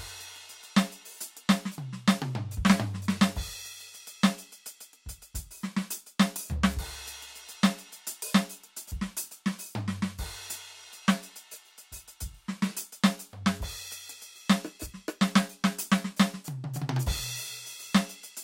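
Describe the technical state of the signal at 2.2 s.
At 2.2 s the music comes through intact, with no dropout, click, distortion or other fault at that moment.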